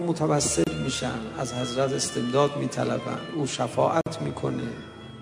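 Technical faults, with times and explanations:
0.64–0.67 s and 4.01–4.06 s, gaps at joins of encoded pieces: silences of 28 ms and 51 ms cut into continuous sound. Each piece was encoded separately, and the encoder's start-up delay and final-frame padding were left in, so the sound drops out abruptly, with smeared edges, then resumes where it stopped.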